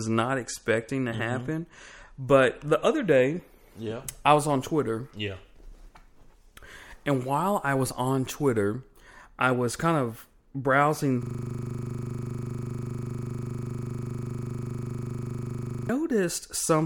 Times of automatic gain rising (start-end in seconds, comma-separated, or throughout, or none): none